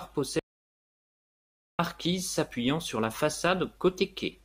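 From 0.39 s to 1.79 s the speech cuts off into an audio dropout to silence, losing 1.4 s. The input was likely lost while writing continued, so the waveform goes flat and the spectrogram shows a blank band with no room tone.

From 2.56 s to 4.01 s a filter restarted on every block resets its state at each block boundary. The speech carries a 25 Hz buzz of ticks whose loudness tracks the signal level. This appears as evenly spaced vertical lines on the spectrogram and small spikes in the waveform.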